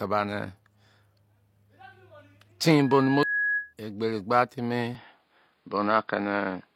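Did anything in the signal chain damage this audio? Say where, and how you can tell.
Yes, at the capture-device stage. From 4.95 s to the end, the speech dulls abruptly, with nothing above 5.1 kHz, a level shift of a few dB, and a new faint noise floor, with no gap. This is likely an input switched to a poorer device. A codec bandwidth drop would narrow the band without changing level and noise together.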